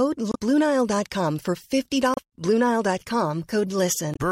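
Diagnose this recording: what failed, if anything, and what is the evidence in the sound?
Damaged data in the compressed speech stream: short glitches at 0.30–0.36, 2.14–2.19 and 4.13–4.17 s, where the decoder misread corrupted frames, lost sync and hunted for the next header.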